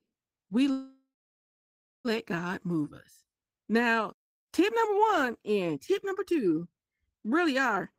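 A speech recording with two timing faults. From 0.71 s to 2.07 s there is a call audio freeze: the sound stretches into a fading buzz or hiss that goes fully silent for roughly the last second, then resumes exactly where it stopped. The likely cause is delayed packets emptying the jitter buffer. Unlike a dropout, no speech is lost. About 1.3 s of filler is inserted, pushing everything after it later by that amount. From 7.76 s to 7.93 s a jitter buffer speed-up makes the speech run at 137% of normal speed. The receiver is trimming a backlog by cutting short pitch-period pieces, about 70 ms in total. It sounds hurried but stays at the same pitch, which separates it from a sample-rate or pitch-shift error where speed and pitch rise together.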